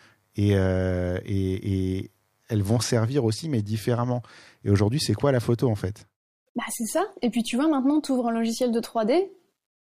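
Nothing in the recording stood out as a technical fault on listening.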